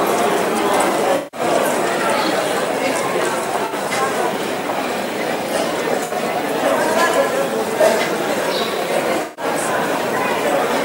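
At 1.16–1.40 s, 3.65–3.73 s, 6.04–6.12 s and 9.22–9.45 s, AAC frame loss with concealment leaves smeared, noisy patches where the decoder rebuilds missing frames from the last good spectrum. Unlike a hard dropout, the gaps are filled rather than silent or clicking.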